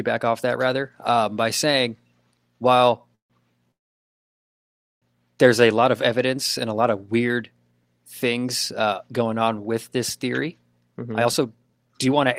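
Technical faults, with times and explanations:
2.77–2.82 s, short stall from a late packet: the last sound is held about 16 ms while the jitter buffer runs dry, then resumes with nothing lost.
3.15–3.33 s and 3.72–5.05 s, call audio freeze: the sound stops, going silent for 130 ms and then 1.29 s, before resuming at "there's a lot of" with nothing skipped, likely from packets held up in transit.
11.03–12.27 s, jitter buffer speed-up: after "on with this theory" the sound runs at 127% speed at unchanged pitch as the receiver trims roughly 0.3 s of pitch periods to cut the delay.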